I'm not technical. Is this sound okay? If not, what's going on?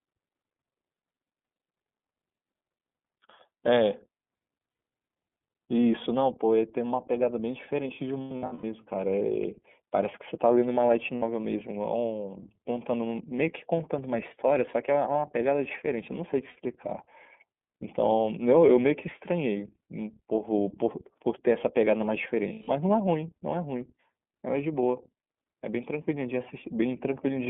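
No. Throughout, the speech sounds thin, muffled and slightly rough or synthetic, like an old phone line. This is the iLBC codec, a phone-call compressor that keeps only roughly 200 Hz to 3.5 kHz and rebuilds the voice in short chunks.

At 4.70 to 4.79 s, 8.22 to 8.64 s, 11.16 to 11.23 s, 16.49 to 16.57 s and 22.52 to 22.68 s, the voice briefly turns into a held, buzzy or breathy smear. These are lost iLBC frames. Pieces of the call went missing, and the decoder filled each gap by repeating the last bit of voice mixed with noise. The gaps match 30 ms chunks, adding up to 90 ms, 300 ms, 60 ms, 60 ms and 150 ms. Around 8.2 s the losses are scattered, with runs no longer than about a tenth of a second. The voice recovers almost immediately after each one.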